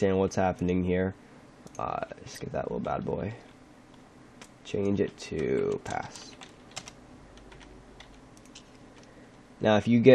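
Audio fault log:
2.35–2.42 s, corrupt frame decoded: flipped bits in the compressed stream were decoded as if valid, so misread gains and codes put energy at wrong frequencies for about 70 ms, which fits roughly three damaged frames. The result is a short burst of misplaced energy peaking around -35 dBFS.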